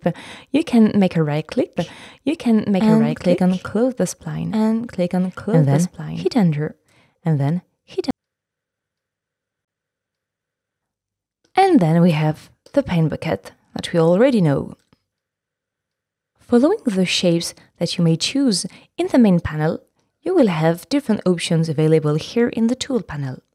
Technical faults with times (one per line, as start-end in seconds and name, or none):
1.77-8.11 doubled audio track
9.65-9.68 CD skip